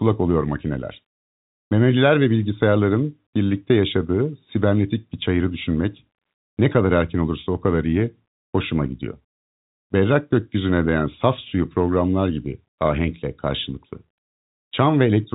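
No faults found; the speech carries the usual G.711 telephone band limit, with nothing above 3.8 kHz.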